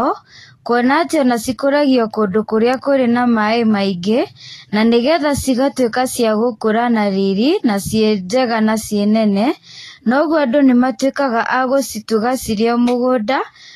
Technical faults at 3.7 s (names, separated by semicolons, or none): Vorbis compression